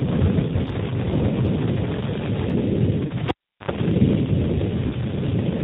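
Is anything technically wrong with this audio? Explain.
Yes. G.729 codec damage runs throughout. The band stops at 4 kHz and the speech sounds rough and synthetic, which fits about 8 kbit/s G.729A coding.

VoIP packet loss concealed by the speech codec occurs at 0.63 to 0.69 s. About 20 ms of audio was missing, so the decoder extrapolated a stretched, fading sound, and the speech stays weak briefly after the gap.

A cable pulled and plugged in runs from 3.28 to 3.71 s. A pop is followed by roughly 370 ms of near silence, including about 76 ms of 50 Hz mains buzz as the tip makes contact, and a second pop.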